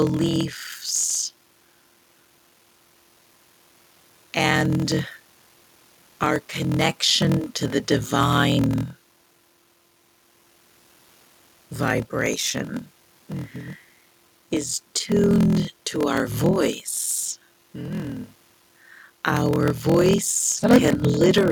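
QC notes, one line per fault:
throughout, block size mismatch (padded): zero-filled gaps in every block cause a 41.7 Hz buzz and speech running at 0.889x speed, which fits 1024-sample writes; waveform shows regular flat gaps, spectrogram regular vertical stripes.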